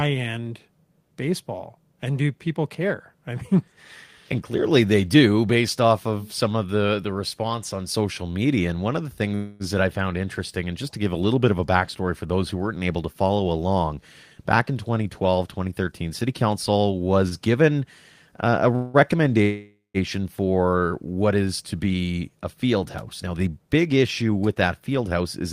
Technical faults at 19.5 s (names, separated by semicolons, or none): call audio freeze